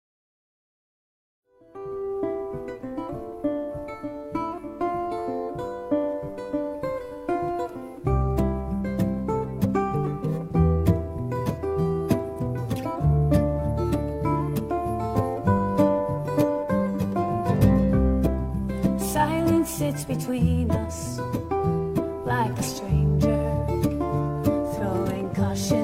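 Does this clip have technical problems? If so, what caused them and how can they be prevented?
No, there are no technical problems to fix here. The opening is a smooth fade in, rising from about 1.5 s to full level by 2.42 s with no click or hard edge.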